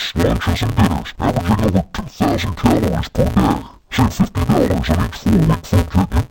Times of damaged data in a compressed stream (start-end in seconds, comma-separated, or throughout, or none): none